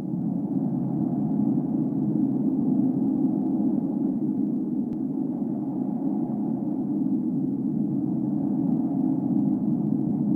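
From 0.12 s to 10.35 s, clock slip clicks run through the audio as a fine, fast rattle, roughly twenty ticks per second. Each is a single sample dropped or repeated, likely because two devices are running on unsynchronised clocks about 500 ppm apart. Unlike random crackle or buffer dropouts, these ticks come at a steady spacing of about 50 ms, leave no audible gap, and disappear whenever the signal goes quiet.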